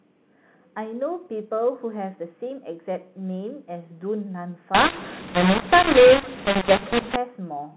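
From 4.75 s to 7.16 s the speech turns harsh and gritty. This is mu-law and A-law mixed up. The samples were coded with mu-law but decoded as A-law. The two logarithmic curves disagree, so levels come out scrambled. Some peaks grow, others shrink. The quietest samples rise well above silence, so gaps fill with hiss. Outside that stretch, the G.711 telephone coding keeps its normal 4 kHz ceiling.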